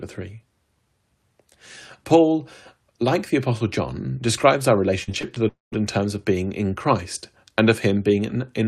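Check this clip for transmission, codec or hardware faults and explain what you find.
Two network faults turn up close together in this speech clip.

From 5.03 to 5.38 s there is repeated packet loss, heard as a robotic sound. Four short gaps, the longest 40 ms, each get patched by extending the sound just before it. That concealment fills about a quarter of the stretch, so the voice turns choppy. On a spectrogram, harmonics freeze into flat smeared bands between normal segments. The waveform shows short repeated cycles where fresh detail should be.

From 5.48 to 5.74 s the sound hangs on as a buzz or hiss and fades, then leaves roughly 170 ms of near silence before speech resumes with that stretch missing. That pattern points to a long network dropout as the likely cause, with the receiver stretching the last audio until it gave up. A spectrogram shows a decaying smear that ends in an empty gap. 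The waveform shows the envelope collapsing to flat.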